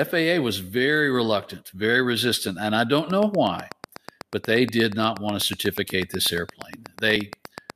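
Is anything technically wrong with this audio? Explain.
Yes, there are two faults in this speech.

From 2.99 s, right after "very resistant and I", to 7.71 s, a train of clicks ticks regularly at 8.2 per second, likely from electrical interference. That comes to roughly forty clicks, peaking about 10 dB above the speech. They show as evenly spaced vertical lines on a spectrogram and sharp spikes in the waveform.

At 7.16 s, compressed frames were skipped: several frames were dropped, so the audio jumps ahead about 20 ms.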